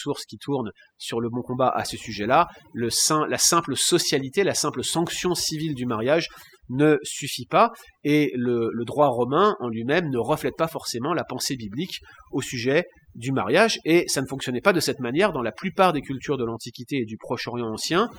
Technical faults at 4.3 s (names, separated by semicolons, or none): overdone noise removal